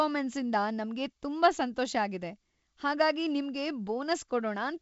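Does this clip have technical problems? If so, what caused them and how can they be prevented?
No, there's nothing here to diagnose or prevent: this is ordinary speech carried over G.722 wideband telephone coding at 56 kbit/s, with the top end stopping around 7.7 kHz, as that coding normally does.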